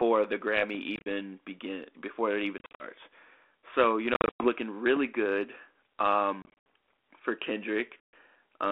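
It's a speech recording over what sounds like a narrowband ADPCM line, probably 32 kbit/s G.726 given the 300 Hz to 3.5 kHz band and only light codec grain. At 0.75 to 0.82 s there's a phantom power thump: a supply switching on or off on a live input pushes a step through the coupling capacitors, giving a short low thud that dies away in about 16 ms. Then there's packet loss on an ADPCM call five times: 0.96 to 1.07 s (just before "begin before it even"), 2.58 to 2.84 s (right after it), 4.14 to 4.49 s, 6.42 to 6.65 s and 8.03 to 8.13 s. Each one is hard-edged silence, from about 80 to 210 ms lost in total, with the longest single gap 110 ms. When the audio comes back it's briefly slightly distorted, because the decoder's predictor and step size have lost track of the sender's.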